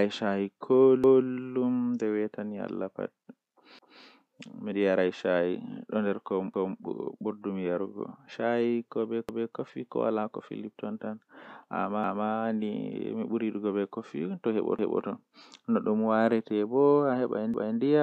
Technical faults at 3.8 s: overlapping chunks

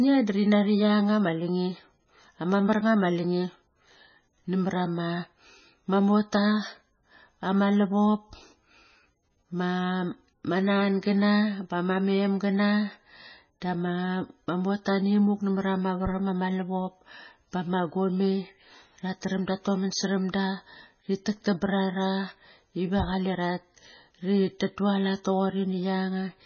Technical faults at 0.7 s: MP3 compression

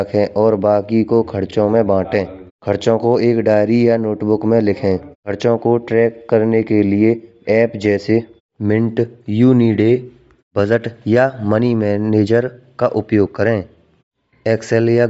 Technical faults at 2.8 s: Bluetooth LC3 compression

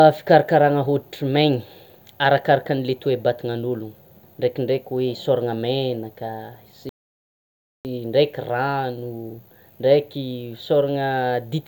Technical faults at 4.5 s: none

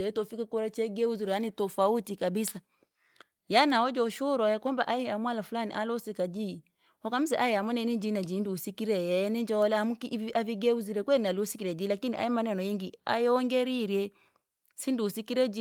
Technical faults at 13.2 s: none

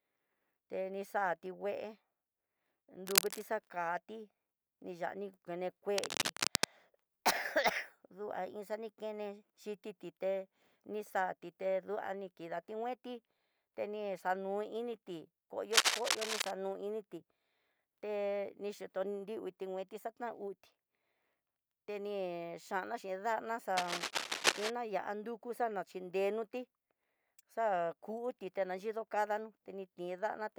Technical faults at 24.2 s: cable scratch noise

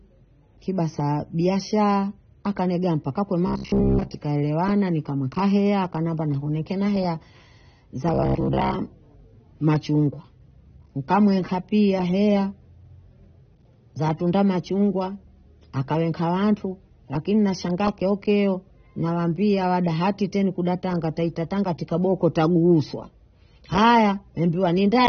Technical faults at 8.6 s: AAC compression; robotic sound from repeated short buffers

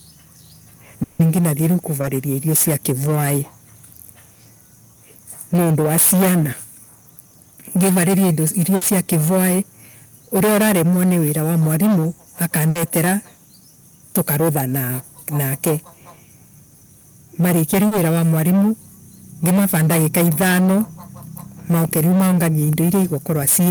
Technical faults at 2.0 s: hard clipping; short concealed packet loss

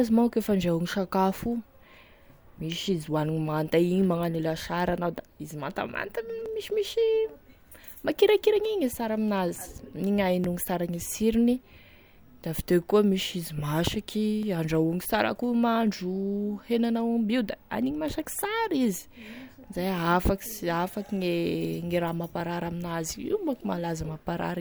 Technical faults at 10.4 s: overlap between stream segments

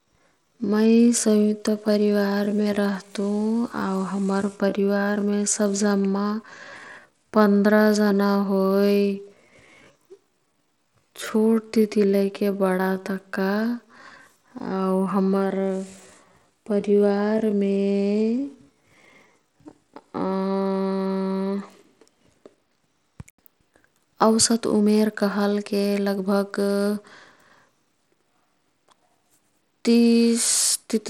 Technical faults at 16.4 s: Bluetooth SBC compression; time-stretched section

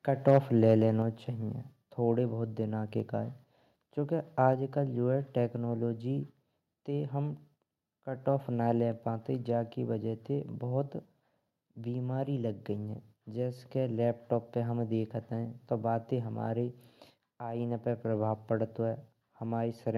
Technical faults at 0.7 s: microphone overload

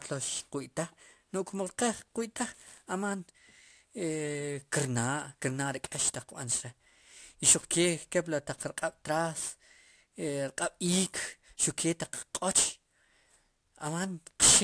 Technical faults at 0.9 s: aliasing

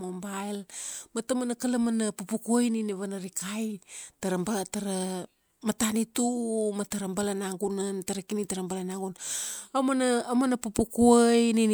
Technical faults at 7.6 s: none

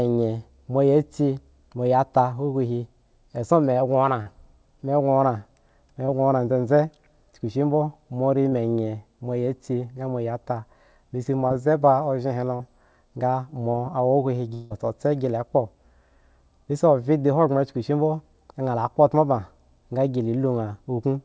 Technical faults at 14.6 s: long network dropout

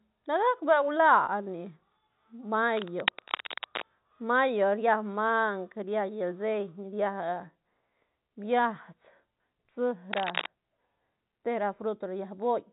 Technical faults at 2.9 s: cable scratch noise

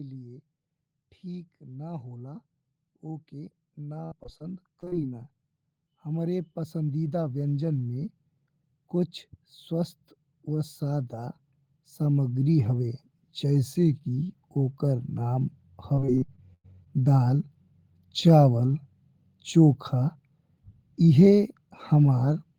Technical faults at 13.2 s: automatic gain rising

